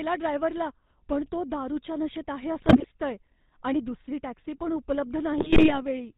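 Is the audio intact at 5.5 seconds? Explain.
No. From 5.38 to 5.79 s, just after "दुसरी टॅक्सी पण उपलब्ध", GSM bit errors corrupt the decoder's filter, pitch and gain values, producing squawks, pops and gargling, with sudden level spikes in the waveform and smeared, distorted bands on a spectrogram. The GSM full-rate codec's buzzy, gravelly roughness is plainly audible here too, with a spectrogram showing nothing above 4 kHz.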